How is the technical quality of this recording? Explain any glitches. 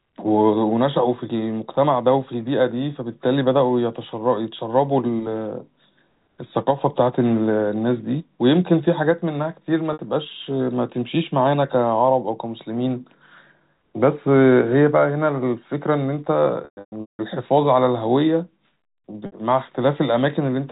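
The speech comes through narrowband telephone coding (G.711 A-law), band-limited below 4 kHz, with three dropouts. Packet loss with pitch repetition occurs at 9.93 s (60 ms), 16.65–17.19 s (420 ms scattered, longest run 180 ms) and 19.26 s (60 ms). The receiver looped the last pitch period to fill the gaps. The short losses sound like a brief buzzy hold. The longer run fades toward silence before speech cross-fades back.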